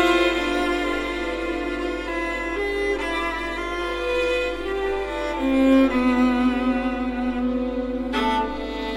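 Nothing in this music clip stood out as a technical problem on listening.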